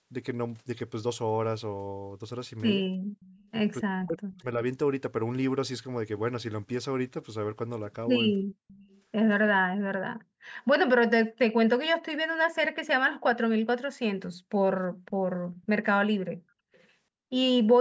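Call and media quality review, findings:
Echo leak at 3.2–3.36 s, 4.34–4.42 s, 8.68–9.01 s, 15.62–15.66 s and 16.73–16.84 s. Faint delayed copy of the voice played on the far end's loudspeaker, trailing by about 330–340 ms. Likely the far end's echo canceller passing loudspeaker pickup. Copy sits roughly 30 dB down early, nearer 40 dB down later.

Speech suppressed in double talk, 4.05–4.6 s. Talker dips, roughly 0.4 s in total, by around 40 dB at worst. Likely the echo canceller failing to separate near speech from loudspeaker echo and attenuating both. Overlaps the 4.34 s echo.

Background gated by the echo canceller, 8.47–8.58 s. Room tone dips by about 40 dB for roughly 0.1 s, then recovers. Canceller clamped the microphone while the loudspeaker played. Adjacent to the 8.68 s echo. Band ends at 8 kHz, consistent with normal call microphone processing.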